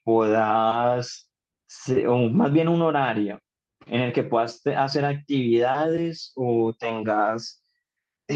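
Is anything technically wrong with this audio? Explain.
No, nothing is technically wrong.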